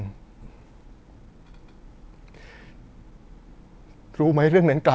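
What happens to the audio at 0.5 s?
Just before 0.5 s there is a skip ahead, at 0.42 to 0.44 s. With later audio already queued, roughly a second of speech was dropped and the delay came down by about the same amount. No fill was inserted, so playback lurches forward. The speech on either side of the missing stretch is butted together with no pause, and about a second of what was being said simply vanishes.

From 0.46 s to 3.19 s, including the 0.5 s point, the jitter buffer speed-up is at work. The buffer was still holding more audio than it aims for, so the receiver repeatedly cut out short slices of one or a few pitch periods. That removed around four tenths of a second in total. The speech plays at about 116% speed with its pitch unchanged, so it sounds rushed.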